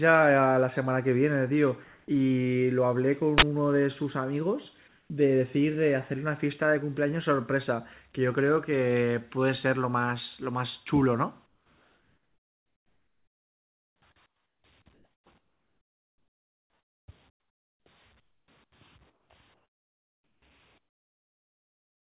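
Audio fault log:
3.38–3.42 s, uninitialised buffer: A loud burst of harsh digital noise lasts about 43 ms. The buffer was played before any audio was written to it, so leftover memory was read out as samples. Its length fits a 2048-sample block being sent out empty.
1.84–2.08, 4.88–5.10, 11.46–14.64, 14.94–17.86, 18.20–18.72, 19.10–20.42, 20.78–22.10 s, comfort noise in place of the background: In each pause the natural background, about 40 dB below the loudest parts, turns into a smooth, even hiss. This is likely discontinuous transmission, with the receiver generating noise shaped roughly like the real background. The level moves by about 2 dB in the first pause and stays level in the second. In the last pause it falls by about 23 dB.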